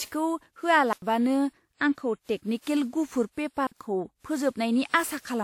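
Throughout the speech, a swirly, hollow smear blurs consonant attacks, and nothing sounds above 18 kHz. That is more damage than a single 96 kbit/s WMA encode would leave, so the likely cause is generation loss, with the audio re-encoded around seven times.

At 0.93 s a block of digital silence cuts the sound out for about 93 ms until 1.02 s, which fits a 4096-sample buffer going unfilled. A shorter block from 3.67 to 3.72 s lasts about 46 ms, consistent with a 2048-sample buffer. Both start and stop abruptly, with no fade or concealment noise, which sets them apart from a smoothed network dropout.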